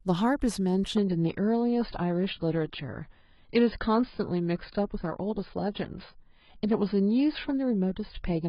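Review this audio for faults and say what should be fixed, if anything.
From 0.97 s to the end, the adaptive stream drops to a lower bitrate with no gap: treble vanishes above 5.1 kHz and codec artefacts thicken. Prevent it by buffering further ahead or setting a minimum bitrate, so a slowing connection cannot force the switch down.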